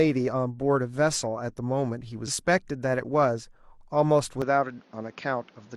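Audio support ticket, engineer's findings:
Short blip at 2.23–2.28 s. Damaged data in the compressed stream: corrupted frames misread by the decoder, which loses sync and skips ahead to the next valid frame header.

From 4.42 s to end, sound turns duller and boxier, nothing above 6.9 kHz, new background noise roughly 30 dB down, no gap or level jump. Likely cause: input switched to a poorer device with narrower bandwidth.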